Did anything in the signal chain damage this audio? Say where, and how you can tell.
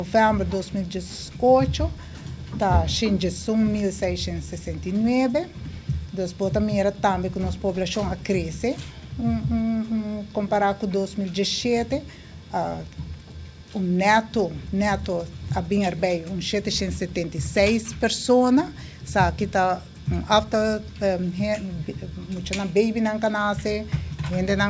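No, nothing in the chain damaged this audio. It has passed through a call's microphone processing, which trims the lowest bass and leaves nothing above 8 kHz, exactly as that stage is meant to behave.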